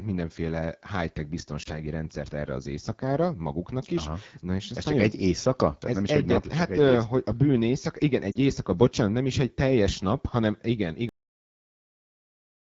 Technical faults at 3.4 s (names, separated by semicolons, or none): AMR wideband (HD Voice) codec